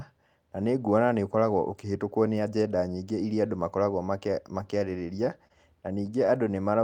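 Between 4.63 and 5.52 s, a handful of packets, about four, were lost or arrived late, and the receiver covered each hole by extending the preceding sound. These scattered short gaps, none longer than around 30 ms, leave the speech clear but dotted with brief ticks and smeared hiccups.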